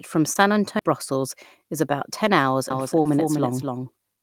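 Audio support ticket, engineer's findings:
Short concealed packet loss, 0.33–0.37 s and 3.01–3.07 s: brief smear and wobble where 20 ms, then 40 ms, of the call never reached the decoder. Receiver extended the prior sound, then cross-faded back. Spectrogram shows smeared, repeated harmonics, with no gap.

CD skip, 0.79–0.82 s: tick plus roughly 20 ms of silence, then the speech resumes from a different point. The laser jumped tracks on the disc spiral. Waveform shows a short flat gap with a discontinuity at each edge.

Doubled audio track, 2.70 s to end: a second full-band copy of the speech, about 5 dB quieter, trails about 0.3 s behind and starts abruptly. Likely cause is a slower second capture path or an out-of-step edit. Spectrogram shows identical patterns shifted in time, with no reverberant tail.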